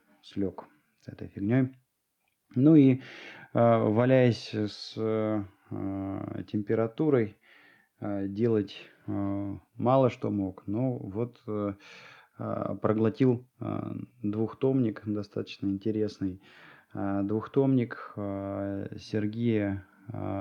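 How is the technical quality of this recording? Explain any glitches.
Listening closely, nothing in the recording stood out as a technical problem, so there are no glitches to explain.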